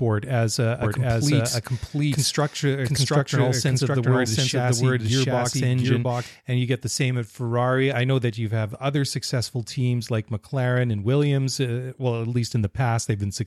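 From 0.83 s to 6.27 s, a doubled audio track is heard, likely caused by the same signal being captured a second time through a slower path, or by an edit holding two copies out of step. A second full-band copy of the speech trails the original by about 0.7 s at roughly the same level, with no decay or room colouring. Every syllable returns as a dry repeat, and the copy appears and vanishes abruptly at each end.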